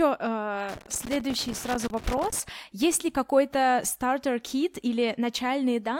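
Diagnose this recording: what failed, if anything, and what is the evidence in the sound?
Irregular crackle and scratching chops the speech from 0.69 to 2.49 s: loose connector crackle in the analogue wiring, a worn contact making and breaking intermittently.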